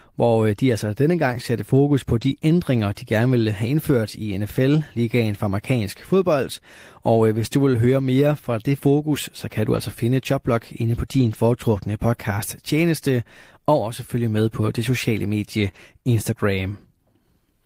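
At 2.21 to 2.27 s, 9.73 to 9.79 s, 11.13 to 11.35 s (after "inde på"), 12.13 s, 14.35 s (between "tjeneste og også følge" and "på det sociale medie") and 15.67 s, lost packets were rebuilt from error correction. The decoder played low-bitrate backup copies, so nothing drops out. The sound just turns rough and grainy, including across the 0.22 s stretch at 11.13 s. At 15.71 to 15.75 s, right after "på det sociale medie", comes a short concealed packet loss. About 20 ms never arrived, and the decoder extended the preceding sound to cover it. Unlike the rebuilt frames, this is a brief smear or wobble. A lost packet rebuilt from error correction follows at 15.75 s.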